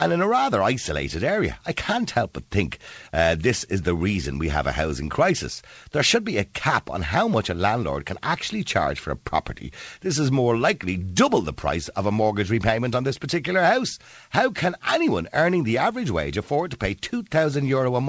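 No technical faults audible.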